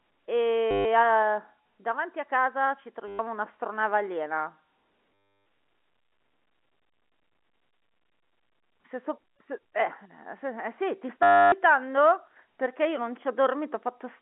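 A short, buzzy robotic stutter interrupts the sound at 0.71 to 0.85 s, 3.08 to 3.19 s, 5.14 to 5.46 s and 11.23 to 11.52 s. This is packet loss with the last packet repeated. Each gap is filled by looping one fragment, which buzzes near 100 Hz, consistent with 10 ms packets.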